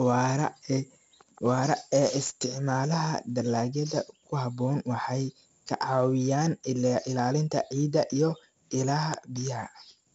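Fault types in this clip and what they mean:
4-bit ADPCM compression, throughout: each sample is coded as a coarse 4-bit step from a predicted value, so a gritty hiss rides on every loud stretch of speech and attacks smear. The damage is heavy, and the dull top ending near 7.7 kHz fits 64 kbps.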